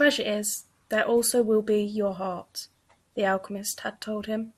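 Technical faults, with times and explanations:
Throughout, MP2 compression: the speech sounds dull and gurgly, with a grainy, swirling edge as upper bands drop in and out. That's likely MPEG Layer II starved of bits, which fits a rate around 80 kbps, so its coarsely quantised sub-bands keep switching off.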